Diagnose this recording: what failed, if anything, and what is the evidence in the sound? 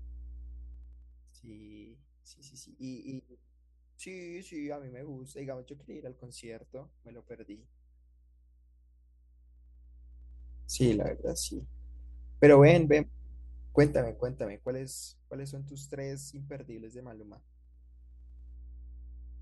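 A ground loop or a nearby transformer in the analogue wiring is feeding the power line into the signal path, producing mains hum. It is a steady 60 Hz tone with some low harmonics, running under the speech for the whole clip at roughly 20 dB below it. Because it never changes with the speech, it is most exposed in pauses, where it sits as a constant low drone that points to the wiring rather than the source.

The gain control in the processing stage moves the level in discrete steps instead of interpolating, which causes zipper noise. Each jump puts a small click into the waveform, about ten per second, so the speech takes on a ticking, zipping texture while the level moves. This happens on fades down of about 15 dB in 2 dB steps at 0.65–1.49 s and 14.03–14.86 s, and on rises of about 15 dB in 1 dB steps at 9.20–10.68 s and 17.18–18.58 s.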